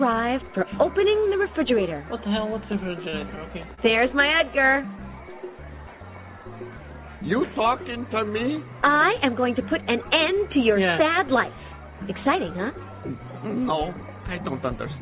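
From 2.84 to 3.80 s there is repeated packet loss, heard as choppy, robotic sound. Four holes open in quick succession, the longest 29 ms. Each is patched by continuing the sound before it, about 79 ms in all, while another 60 ms is simply missing. Throughout the clip nothing reaches above 4 kHz, which fits a narrowband call codec such as G.711.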